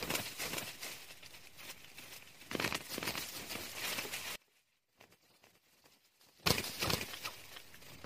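The whole clip carries a doubled audio track: a second full-band copy of the sound trails the original by roughly 400 ms, only a few dB quieter, around 5 dB down. It's dry, with no decay or room colour, so it reads as a clean echo rather than reverb. That points to the same audio being picked up twice, most likely via a second, slower capture path running alongside the main one. Then from 4.36 s to 6.46 s there's an audio dropout to a faint residue. The signal cuts out abruptly for 2.1 s and leaves only a faint trace of the sound, somewhere around 25 dB below its normal level, before snapping back mid-flow. The hard edges rule out a natural pause or a fade. The likely cause is the wanted signal being lost upstream while the rest of the chain stayed live and passed through that low-level leak.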